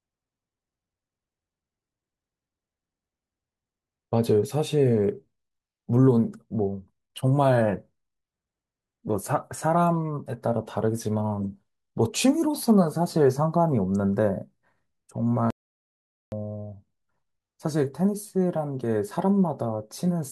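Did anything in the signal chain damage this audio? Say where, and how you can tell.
Yes: audio dropout to silence, 15.50 to 16.32 s. The sound cuts to silence with no room tone, likely a lost input link before the recorder.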